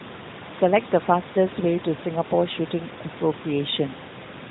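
This is a speech clip, and nothing is technically wrong with it.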